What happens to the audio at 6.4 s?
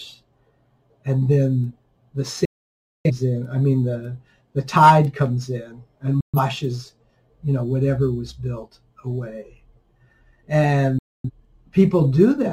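A digital broadcast dropout runs from 6.21 to 6.39 s: the receiver lost valid frames and muted, fading out within about 3 ms into silence until clean frames returned.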